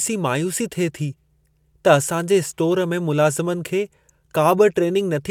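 No technical faults can be heard anywhere in the speech recording, which stays steady and intact throughout.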